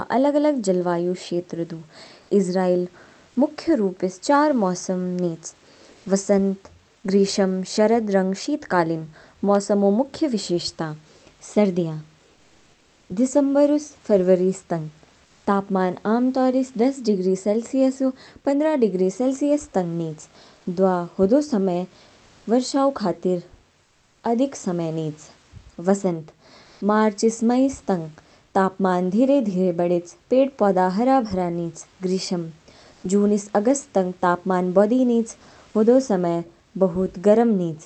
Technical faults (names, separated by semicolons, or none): comfort noise in place of the background